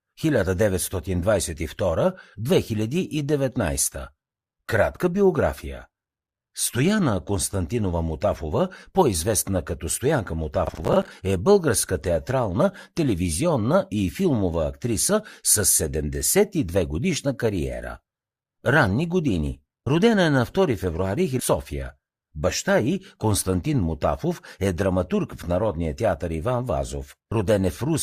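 From 10.67 to 11.11 s, a gritty burst of crackle tears across the speech, ending just before "е българска театрална телевизионна". This is processor overload crackle: around twenty short buffers of roughly 10 ms each missed their deadlines, and each gap was filled with stale audio, giving hard-edged fragments.

At 21.39 to 21.45 s the speech jumps abruptly forward with a small blip, as though part of the programme has vanished. The likely cause is a stream segment skipped: one segment failed to load and playback continued from the next.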